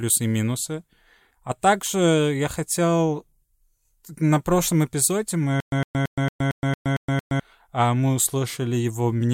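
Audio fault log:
5.60–7.40 s, stutter with silent gaps: just after "прошлом эпизоде" the speech catches on a fragment of about 108 ms, which plays, drops into dead digital silence for about 119 ms, and returns eight times at an even 227 ms pace before "а мы" resumes. The cause is likely a stalled player or stream replaying its last fragment at each retry and then running empty, so the speech that belonged in that span is missing.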